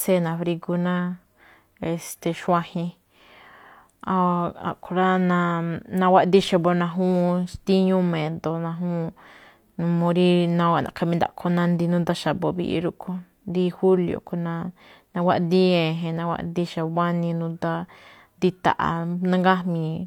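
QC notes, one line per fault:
Nothing to flag on this one; the speech comes through without any technical trouble worth noting.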